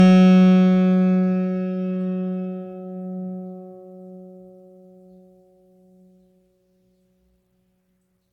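Throughout the music there is generation loss: a swirly, hollow, smeared sound with blunted attacks, worse than one AAC-LC pass near 96 kbit/s would give. It likely comes from about four re-encodes on shifting frame grids. A spectrogram shows spectral holes and blurred transients.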